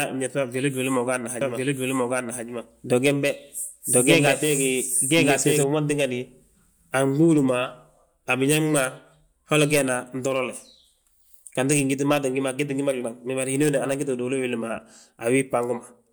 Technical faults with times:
1.41-5.63 doubled audio track

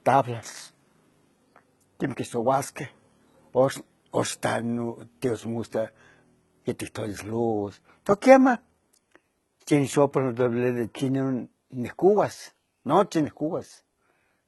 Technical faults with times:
0.00-14.47 HE-AAC compression

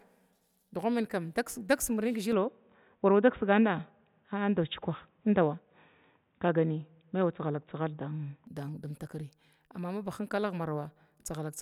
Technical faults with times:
2.32-8.47 input switched to a poorer device

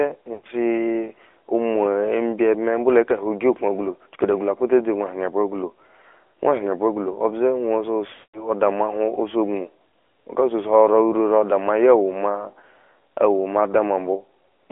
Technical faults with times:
0.00-14.71 AMR narrowband mobile codec
0.34-0.47 lost AMR speech frames
8.14-8.48 lost AMR speech frames

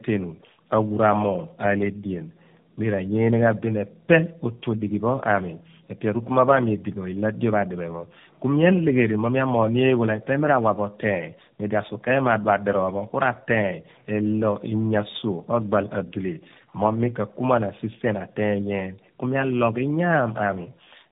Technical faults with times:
0.00-21.11 tandem speech coding

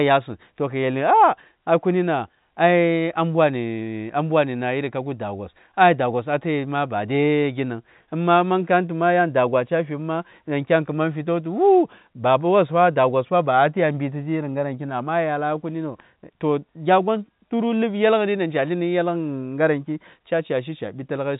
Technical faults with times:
none

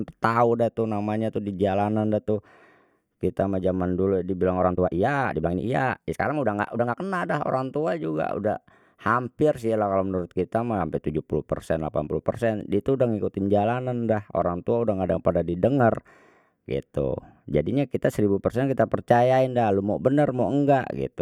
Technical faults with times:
4.55-7.05 time-stretched section

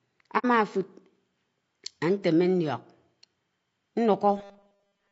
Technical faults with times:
0.00-5.11 low-delay AAC compression
0.38-0.45 AAC frame loss with muting
4.37-5.11 robotic sound from repeated short buffers

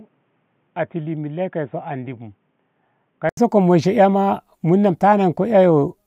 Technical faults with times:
0.00-3.37 input switched to a poorer device

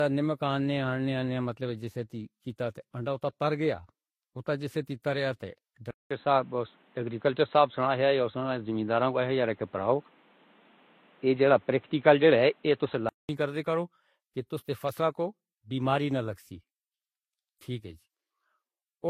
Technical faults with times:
0.00-19.09 transcoding between lossy codecs
5.91-13.29 input switched to a poorer device

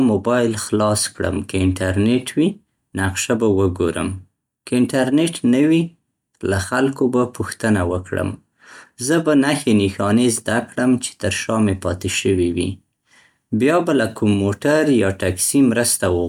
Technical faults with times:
none

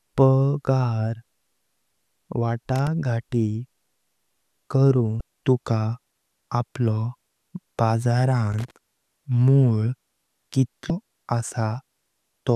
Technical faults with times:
2.76-2.87 loose connector crackle
5.17-5.21 damaged data in a compressed stream
8.52-8.71 loose connector crackle
10.87-10.90 damaged data in a compressed stream

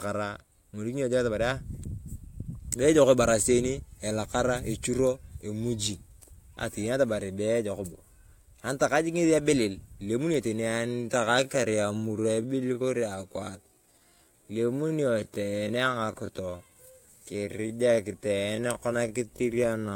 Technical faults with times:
10.56-19.95 time-stretched section

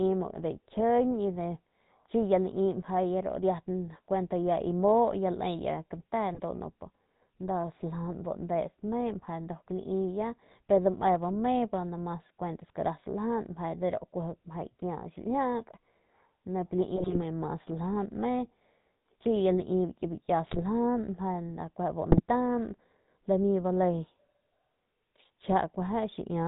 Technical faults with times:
0.00-26.48 GSM full-rate codec
6.34-6.40 GSM bit errors
16.96-17.19 GSM bit errors
20.45-20.63 GSM bit errors
22.10-22.21 GSM bit errors

